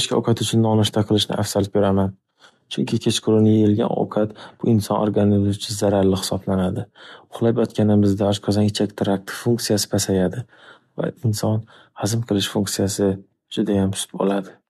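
No technical faults can be heard anywhere in the recording, with the signal staying continuous and stable throughout.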